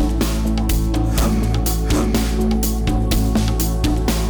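Harsh fuzz sits on every loud moment throughout: hard clipping, where peaks driven about 10 dB past the stage's limit are cut flat on a small share of samples.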